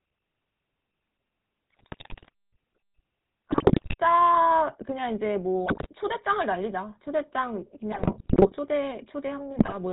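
It's a speech clip that's been through the GSM full-rate codec the whole way, and you can really hear it: the voice has that buzzy, gravelly edge and nothing above 4 kHz, which fits the old 13 kbps pulse-excited coder that rebuilds the voice from a vocal-tract model. On top of that there are GSM bit errors at 1.70–2.29, 3.52–3.95, 5.66–5.87, 7.92–8.52 and 9.58–9.74 s, where corrupted filter, pitch and gain values make the voice squawk, pop and gargle.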